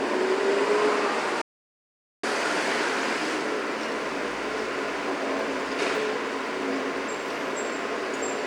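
From 1.42 s to 2.23 s the sound drops to dead silence, with no room tone. This audio dropout to silence likely came from a lost input.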